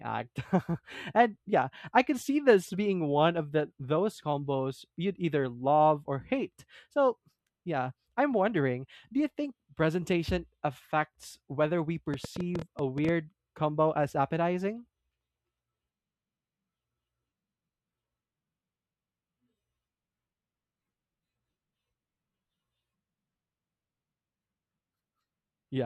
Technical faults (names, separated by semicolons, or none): train of clicks